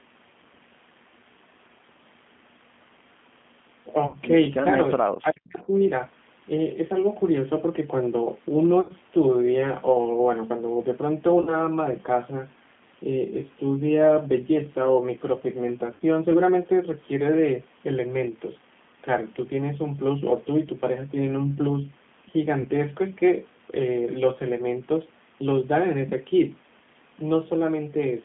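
The G.729 codec runs throughout. The speech is squeezed into a 150 Hz to 3.5 kHz telephone band and rebuilt from a vocal-tract filter, pitch predictor and sparse pulses, which fits the 8 kbit/s G.729A variant. The result is plainly rough and slightly synthetic.

VoIP packet loss concealed by the speech codec first strikes at 4.07 to 4.17 s, where 60 ms of audio is missing. The decoder extends its last pitch and filter with falling gain, so the sound smears into a buzzy tone or coloured noise that fades, and it stays weak briefly after audio resumes.

Speech suppressed in double talk follows at 4.96 to 5.73 s. The level dips deeply for about 0.7 s, at worst roughly 40 dB. The likely cause is an echo canceller ducking the talker while the far side spoke.

The same packet-loss concealment recurs at 8.81 to 8.93 s (80 ms lost), 11.41 to 11.61 s (60 ms), 15.94 to 16.02 s (60 ms) and 22.61 to 22.68 s (40 ms). 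Each time the sound stretches into a decaying buzz or noise before clean frames rebuild it.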